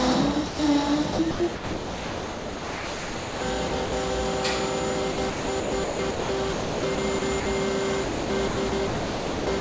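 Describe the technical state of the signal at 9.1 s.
Sound chopped by the voice detector, from 8.03 s to the clip's end, likely gates about 1.01 s into comfort noise. The waveform shows smooth, low-level stretches, and the spectrogram shows featureless noise up to 8 kHz.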